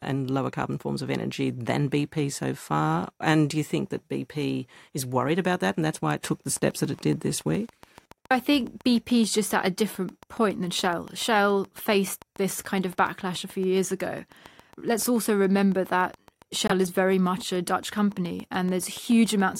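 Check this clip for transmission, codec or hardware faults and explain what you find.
Two faults are present, one interference and one codec-related.

From 6.57 s, just after "why it took the", to 19.56 s, a train of clicks ticks at a regular 7.1 per second, roughly a hundred in all, peaking about 5 dB above the speech. The likely cause is interference from nearby equipment.

At 16.67 to 16.73 s, a corrupt frame muted: the decoder rejected damaged data and inserted 52 ms of silence. This abrupt hole fits two dropped frames.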